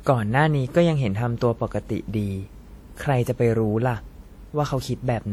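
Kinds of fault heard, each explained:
WMA compression: the speech carries a plainly audible ringing, washy smear with breathing hiss, likely from a transform codec at about 48 kbps, though content still reaches 20.1 kHz.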